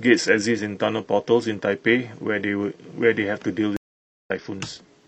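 A speech recording with one stream reconnect: at 3.77 s the audio cuts to silence for about 0.49 s, resuming at 4.30 s at a point roughly a fifth of a second further on, so a stretch of speech is simply missing. That skip is what separates it from an ordinary dropout or buffer underrun, which would pause and pick up where it stopped. Here the connection broke and the player restarted a fresh decoder mid-stream at a later position.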